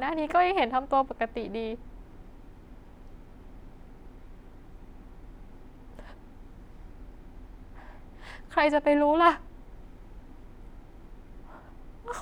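Speech recording with no audible technical faults anywhere in the signal.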